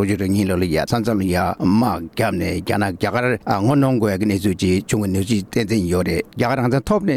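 Nothing in the audio points to a technical fault; no dropouts, glitches or distortion turn up anywhere along the way.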